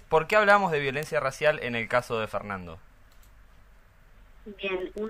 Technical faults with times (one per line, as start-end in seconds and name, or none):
0.15-5.07 word clock ticks